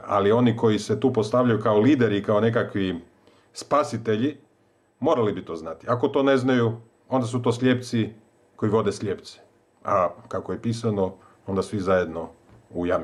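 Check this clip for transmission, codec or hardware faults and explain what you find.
Gain pumping runs throughout the clip. The input gain is likely set far too high, so a fast limiter pulls the level down on every loud sound, a swing of about 10 dB. Loud and soft parts end up closer in level, leaving a squashed sound.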